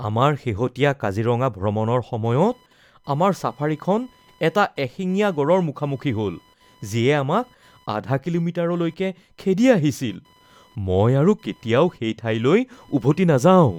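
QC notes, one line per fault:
2.24 to 13.79 s, computer activity noise: a faint chirping buzz near 1 kHz, roughly 40 dB under the speech, as the computer's load changes shift the shared audio ground.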